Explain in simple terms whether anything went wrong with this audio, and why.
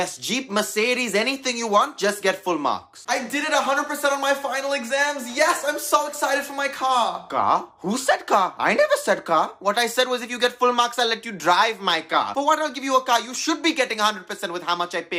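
Something did go wrong, briefly. From 12.10 to 12.19 s there is a short burst of DAB burbling. For about a tenth of a second, you hear a few watery blips. This happens when a digital radio signal is weak. A few bits arrive wrong and slip past the error correction. Wrong values then put short blips of noise into single frequency bands. The length fits about two audio frames being hit.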